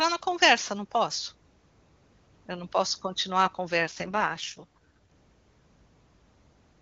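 At 3.82 s the speech turns rough and synthetic. This is an AMR rate drop. On a weak link the network lowered the codec's bitrate to free bits for error protection. The sound points to a fall from the clear 23.85 kbit/s wideband mode to the 6.6 kbit/s mode. The band stays just as wide, and there is no gap. The voice simply grows raspy and buzzy. Clarity returns at 4.77 s.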